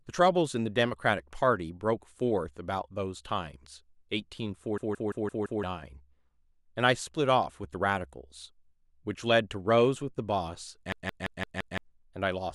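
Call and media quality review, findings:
System hang loop at 4.78 to 5.63 s: speech locks into a machine-gun stutter, the same 171 ms piece repeating five times at about 5.9 Hz. Driver or OS stalled while the audio device kept replaying its ring buffer, which fits an 8192-sample buffer. About a second of real audio is gone.

Same hang loop again at 10.92 to 11.78 s: identical stutter length and rate, so it's probably the same stall recurring.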